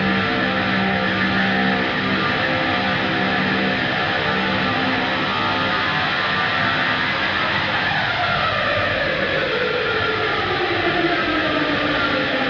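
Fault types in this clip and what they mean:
There are no fault types to list for this clip.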